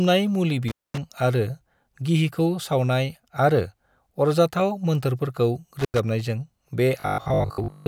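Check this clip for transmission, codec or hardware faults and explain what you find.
Two kinds of fault are audible in this speech clip.

Intermittent contact at 0.68 to 0.98 s and 5.79 to 5.99 s: a loose connection opens for about 230 ms and 90 ms. The sound drops to faint hiss with crackle at each edge. The waveform shows a near-flat gap bounded by sharp spikes, and the spectrogram shows vertical broadband lines at the edges.

Robotic sound from repeated short buffers from 7.00 to 7.86 s: a rigid, metallic 50 Hz buzz follows the speech only roughly, most likely from a 20 ms buffer being replayed because new audio arrives too slowly. Roughly seven-tenths of that stretch consists of repeats. The spectrogram shows evenly spaced 50 Hz harmonic stripes, and the waveform shows identical repeating cycles.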